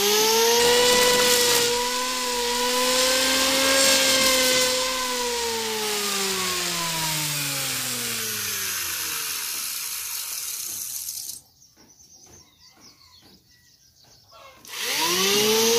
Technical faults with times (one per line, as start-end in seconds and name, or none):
0.59-8.20 periodic clock jitter